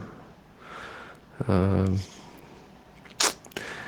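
No technical faults can be heard in this recording.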